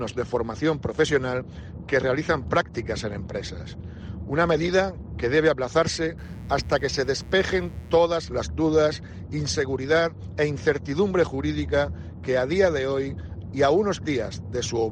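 A steady, raspy mains buzz sits under the audio from 6.18 to 8.05 s. It is built on 60 Hz harmonics, roughly 30 dB below the main sound.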